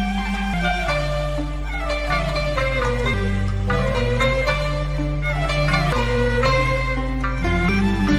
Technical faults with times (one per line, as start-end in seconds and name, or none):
0.54 damaged data in a compressed stream
3.14 damaged data in a compressed stream
5.92 damaged data in a compressed stream
7.69 damaged data in a compressed stream